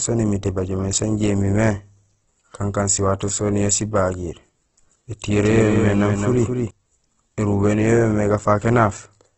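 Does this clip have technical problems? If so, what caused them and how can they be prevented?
Yes. Opus compression runs throughout the speech: nothing is heard above 8.1 kHz, and the damage is heavy, with the speech turned rough, grainy and noisy where the encoder, short of bits, has filled bands with folded or noise-like energy instead of the real detail. That coarseness points to a low bitrate around 12 kbps, likely in Opus's music mode. Preventing it means encoding at a higher bitrate or letting the encoder use its speech mode.

A doubled audio track appears from 5.33 to 6.71 s: a second full-band copy of the speech trails the first by about a fifth of a second, about 5 dB quieter, with no reverberant tail, cutting in and out abruptly at both ends. The likely cause is the same signal arriving twice, through a slower second capture path or two misaligned copies left overlapping in an edit. 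Preventing it means monitoring only one input path and checking edits for stacked duplicate regions.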